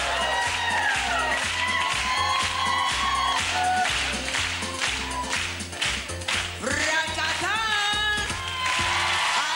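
From 3.28 s until the end, a thin fixed-pitch tone sits under the sound at 8 kHz. This is USB whine: the bus polls in 125-microsecond microframes, and that rhythm of current draw leaks into the audio path through shared power or ground. It sits roughly 30 dB below the signal. Unlike mains hum, which lives at 50 or 60 Hz and its low harmonics, this tone is high and steady.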